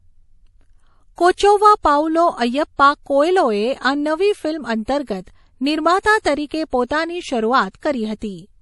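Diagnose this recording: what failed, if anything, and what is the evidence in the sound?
The codec stage is at fault. Across the whole speech clip there is nothing above 11.5 kHz, a hard shelf rather than the gentle roll-off of a microphone or anti-alias filter, and the damage is plainly audible as a watery, swirling texture on sibilants where weak spectral lines drop in and out between frames. That pattern points to MP3 compression, likely at a starved bitrate around 48 kbps.

The same transform coding causes pre-echo. Short hisses appear just before sharp onsets at 1.15, 1.34, 4.86, 6.01, 6.22 and 6.87 s, each lasting 24 to 37 ms. The one at 1.34 s comes just before "પાઉલો અય્યપ્પા કોએલોએ આ", and the one at 4.86 s follows "કોએલોએ આ નવી ફિલ્મ". Quantisation noise sized for each attack has spread back across its block. Unlike a click or a dropout, the smear always leads into a transient and never follows it.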